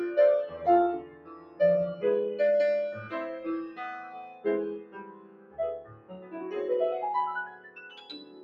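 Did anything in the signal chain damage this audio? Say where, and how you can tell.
Yes. In the call-processing stage, a speech-oriented noise suppressor was left running on material that isn't speech. It treats sustained tones, ambience and decay as noise and keeps pulling them down, so the level swings by around 20 dB throughout. Onsets get through while anything held or fading sinks behind them. That makes the sound pump and flutter, with tails collapsing early and the whole thing thinning out between attacks.

The clearest sound cut by the noise suppressor falls at 0.99–1.6 s, 4.29–4.45 s, 4.79–5.58 s, 5.8–6.36 s and 7.5 s to the end at 8.44 s. At each of these the gain reduction bites harder than elsewhere, about 12 dB at its deepest and about 9 dB in the brief dip at 4.3 s. Most stretches last about half a second or more. Steady and decaying parts drop away audibly while the sharper edges stay at level.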